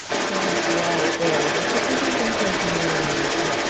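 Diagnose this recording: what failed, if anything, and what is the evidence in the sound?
Call processing failed: a second talker runs through the whole recording, from 0.0 to 3.7 s, at a level a little above the main voice. This is likely other side's voice leaking through, as residual loudspeaker echo the canceller left in. A spectrogram shows two interleaved harmonic patterns throughout.

Call processing again: from 0.02 to 0.09 s, about 70 ms, the main voice dips by a few decibels, likely speech suppressed in double talk as the canceller turned everything down under overlap. The waveform envelope shows a brief notch, with the spectrogram fading across the 8 kHz band.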